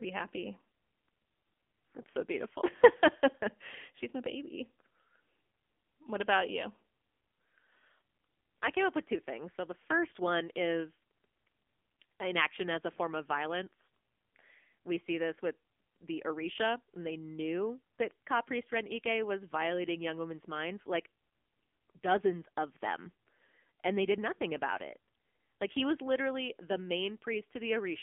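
Throughout, the speech sounds thin, buzzy and synthetic, confined to roughly 250 Hz to 3.5 kHz with nothing above 3.6 kHz, as an AMR narrowband mobile codec at a low rate near 7.95 kbps would produce. At 25.90 s a sharp snap sits on top of the sound, likely an electrical switching spike from nearby equipment arcing into the line.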